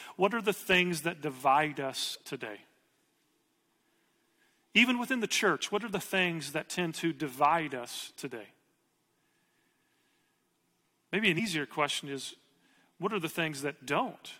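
After "the things that divide" at 2.14–2.16 s, and at 11.38 s just before "question is", compressed frames are skipped. About one, then three, 23.2 ms frames are lost, so the audio jumps ahead by roughly 20 ms, then 70 ms.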